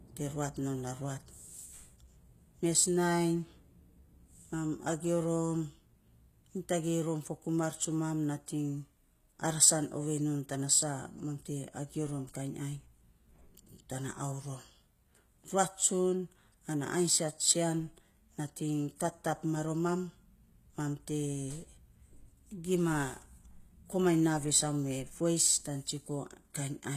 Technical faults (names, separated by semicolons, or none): HE-AAC compression